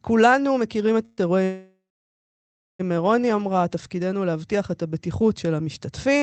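Packets were likely held up in transit, draining the jitter buffer, and the receiver stretched the last sound to cover the wait: a call audio freeze. At 1.05 s this lasts 0.12 s as a short fading buzz or hiss. From 1.44 to 2.81 s it returns for 1.35 s, the held sound dying away into about 1 s of silence. Nothing is lost; the audio resumes where it stopped, now lagging by those gaps, with the call codec's top near 8 kHz.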